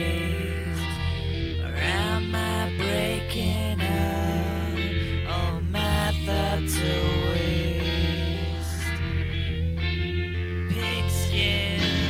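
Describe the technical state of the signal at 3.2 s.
At 3.2 s the signal is intact, with no dropout, distortion, glitch or other technical fault audible at that point.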